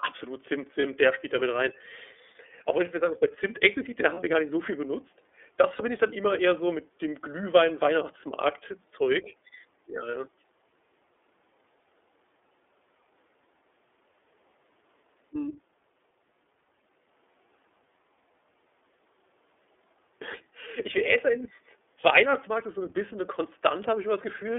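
The whole thing runs through the iLBC codec. The band sits roughly between 300 Hz and 3.5 kHz, and the coding damage is plainly audible: speech comes across clear enough but rough and a bit synthetic, with the codec working in 30 ms frames.

Then there are lost iLBC frames, each a single 30 ms dropout, at 0.81 s (just before "der spielt da mit"), 4.14 s (between "explizit da" and "wir gar nicht so"), 5.76 s (before "ich dann immer eher") and 10.11 s. Each gap gets filled with a repeated pitch cycle, so you hear a brief buzzy held vowel before the voice snaps straight back.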